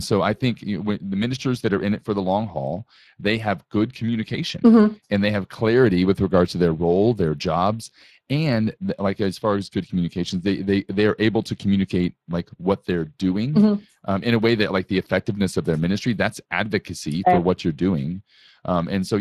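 Speex codec damage runs from start to finish. The speech comes through a CELP coder, with a bitrate that fits roughly 22 kbps. The thinned excitation leaves the speech noisy and hoarse, and any band above 8 kHz sounds like shaped hiss.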